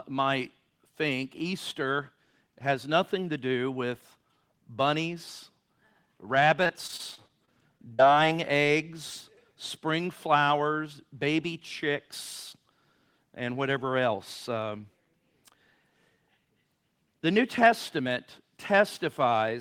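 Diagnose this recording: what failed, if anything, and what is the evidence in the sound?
Repeated packet loss (robotic sound) points to a network failure. Between 6.63 and 8.01 s the speech turns choppy. About ten short holes appear in that stretch, the longest near 47 ms. Packets arrived late or not at all. The receiver bridged each hole by extending the last sound it had, about 217 ms of patched audio in total, roughly 16% of the stretch. Another 160 ms is simply missing.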